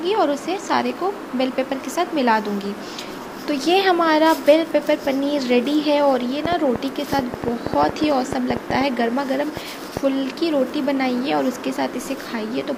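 Interference from nearby equipment or a faulty connection or power supply is likely injecting repeated pulses, producing a train of clicks from 6.46 to 9.98 s: around twenty similar pops at an uneven rate of about 5.7 per second, peaking roughly 15 dB above the sound.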